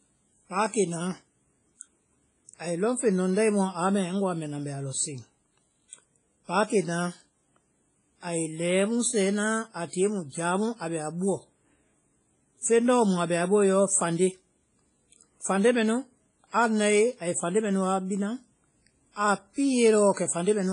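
Throughout the speech, nothing survives above 10.2 kHz, and a ringing, washy smear trails each syllable, with hiss that breathes with the signal. That points to likely WMA compression at a low bitrate near 24 kbps. Steady background noise would not track the speech this way.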